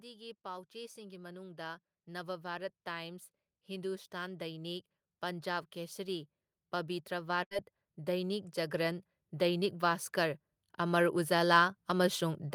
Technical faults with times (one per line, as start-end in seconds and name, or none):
0.05-6.32 automatic gain rising
7.08-12.55 automatic gain rising
7.43-7.54 burst of packet loss